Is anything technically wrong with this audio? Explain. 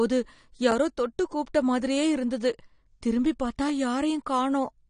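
Yes, there are two faults in this speech clip.

AAC compression runs throughout, likely from low-bitrate AAC-LC coding; the sound points to roughly 32 kbps. With nothing above 9.7 kHz, the top end is cut off, and the quantisation against a hearing model leaves the speech dull and smeared, with a warbling, fizzy edge on sibilants.

Chunks out of order occur at 3.68 to 3.70 s: a 10 ms piece of audio plays one chunk late, after the piece that should follow it. Nothing is missing, but the swapped order creates hard joins, heard as a brief jumbled moment.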